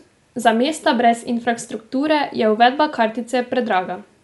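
Across the whole speech clip the sound is dull and muffled, with nothing above about 11.6 kHz, and a rough, fluttering grain clings to the voiced tones. This is plainly audible Dolby Digital compression, likely from a starved encode, and the damage fits a rate near 64 kbps. The encoder cut the top of the band and left many frequency lines without mantissa bits, so the decoder filled those gaps with dither noise.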